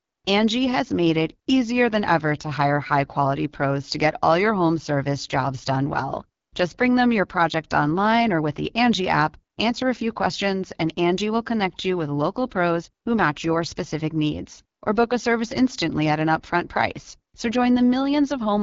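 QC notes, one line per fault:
Throughout, AMR wideband (HD Voice) codec: the speech is plainly rough and raspy, because a low-rate vocal tract model with sparse pulse excitation can't rebuild fine voice detail, which fits the 8.85 kbit/s mode, the second lowest. A spectrogram shows harmonics smeared and grainy below 6.4 kHz, a noise-like band above that where the codec fills in shaped noise, and a hard ceiling with nothing above 7.4 kHz.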